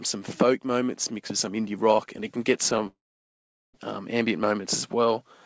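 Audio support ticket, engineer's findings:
Gap 2.87–3.76 s: short fading buzz, then 0.78 s near-silence, audio resumes with content missing. Likely long network dropout. Spectrogram: empty vertical block; waveform: flat.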